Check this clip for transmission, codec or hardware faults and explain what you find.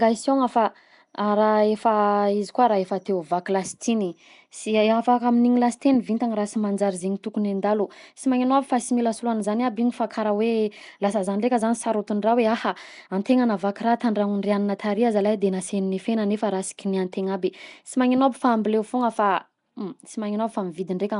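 Throughout the speech, the audio carries a rough, hissy halo and a smeared, underwater quality, and nothing is heard above about 10.6 kHz. This is likely Nellymoser compression, Flash's old microphone codec. It codes short fixed blocks at a flat, low bit depth, consistent with a rate around 44 kbps, so weak bands get no bits and are refilled with noise. That substituted noise sets it apart from MP3-style swirling artefacts or a clean low-pass roll-off.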